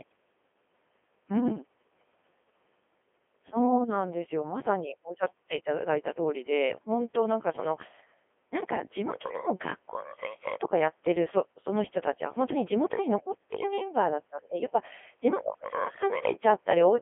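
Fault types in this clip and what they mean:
Codec 2 vocoder: the speech is rebuilt from pitch, voicing and a spectral envelope rather than kept as a waveform, giving heavy robotic buzz throughout, a 250 Hz to 3.4 kHz band, nothing above 3.6 kHz, and detail loss consistent with the 2.4 kbit/s mode.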